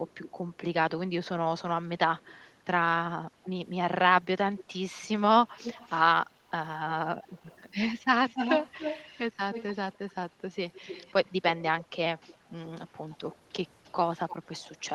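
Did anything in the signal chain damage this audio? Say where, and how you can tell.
Yes, an echo leak in call processing, likely a far-end echo canceller passing loudspeaker pickup back. A delayed copy trails the speech at 0.07–0.57, 2.17–2.53, 3.43–3.49, 4.57–5.97, 6.88–11.32 and 12.18–14.95 s. The lag grows from 262 to 304 ms. The echo is loudest, only about 5 dB under the speech, at 6.88–11.32 s.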